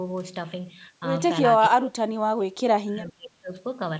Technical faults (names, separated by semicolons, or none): speech suppressed in double talk